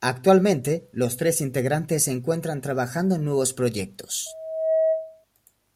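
From 4.26 s to 5.25 s the speech is overtaken by loudspeaker feedback squeal: a steady 641 Hz tone swelling over roughly half a second to a few decibels above the voice. The microphone re-amplifies its own loudspeaker, so unlike a hum or whistle, it grows by itself.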